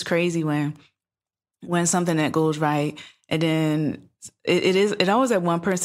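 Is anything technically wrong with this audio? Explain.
No, nothing technically wrong is audible anywhere in this speech recording.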